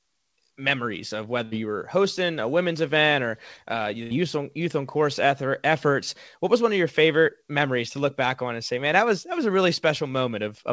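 At 1.44 to 1.54 s, after "memories of", and again at 4.03 to 4.13 s, after "event or uh the", a burst of packet loss forced the receiver to stretch the last sound and fade it for about 70 ms. Speech then resumes at "you were hosting a" and "on youth on course" with about 80 ms skipped. Throughout, the call path leaves nothing above 8 kHz.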